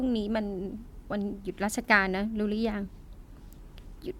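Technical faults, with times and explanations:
No technical faults can be heard in this speech clip.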